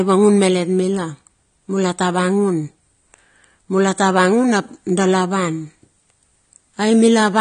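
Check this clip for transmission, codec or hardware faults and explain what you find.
One codec fault runs through the whole clip. AAC compression, throughout: nothing sounds above 9.7 kHz and the speech is audibly dull, smeared and fizzy, likely from AAC-LC at roughly 32 kbps.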